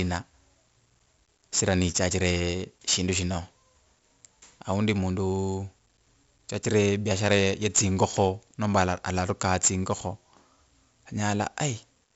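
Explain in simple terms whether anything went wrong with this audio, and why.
A gritty hiss rides on top of the speech from start to finish, rising whenever the voice gets louder, and the sharp starts of sounds come out rough and distorted. The audio also sounds dull, with nothing above about 7.7 kHz. The cause is heavy 4-bit ADPCM compression. Each sample is stored as a small guessed step rather than its true value. When the guess can't keep up, especially on sudden sounds, that error becomes noise and grit.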